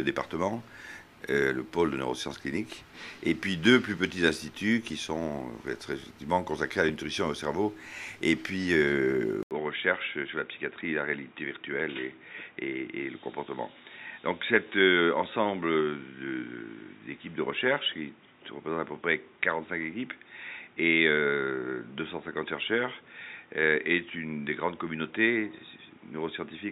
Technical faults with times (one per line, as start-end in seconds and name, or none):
9.43-26.71 input switched to a poorer device